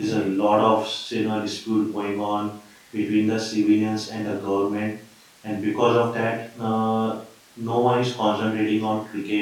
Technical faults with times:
none

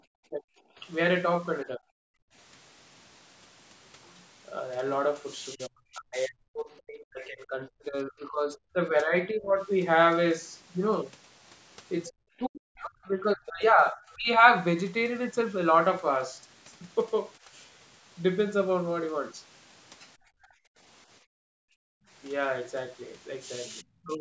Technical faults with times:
0.30-0.45 speech suppressed in double talk
0.73-0.78 background gated by the echo canceller
1.64-1.86 speech suppressed in double talk
2.14-2.34 background gated by the echo canceller
5.55-9.59 speech suppressed in double talk
12.08-14.45 speech suppressed in double talk
20.73-22.08 background gated by the echo canceller
23.80-24.20 speech suppressed in double talk

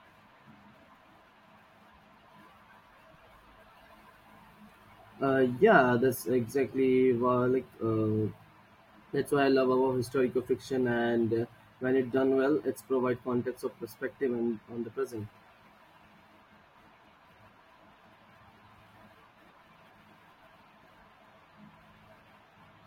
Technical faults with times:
none

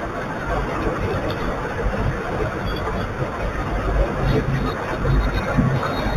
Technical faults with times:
0.00-6.16 imaging from linear upsampling

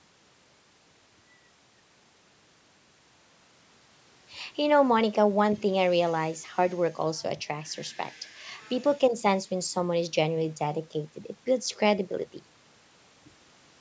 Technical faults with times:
none

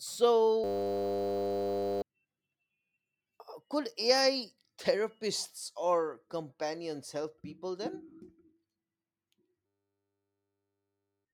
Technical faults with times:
0.64-2.02 system hang loop
9.66-11.25 system hang loop

